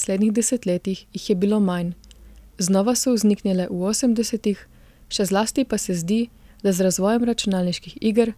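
No technical faults can be heard anywhere in the recording. Nothing in the signal chain draws attention to itself at any point in the speech.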